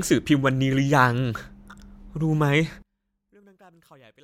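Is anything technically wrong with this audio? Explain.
Yes. From 2.82 s to the end, one stereo channel has likely been inverted in polarity, so when the two channels are combined into mono, everything common to both cancels out. The speech here was recorded nearly identically in both channels, so it largely disappears, dropping by about 32 dB. What remains is only the small difference between the channels: a faint trace of the speech where the full speech had been.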